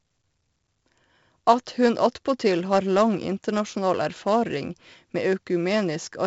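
The speech carries heavy 4-bit ADPCM compression throughout: a gritty hiss riding every loud syllable, smeared attacks, and nothing above 7.7 kHz, which fits a 64 kbps stream.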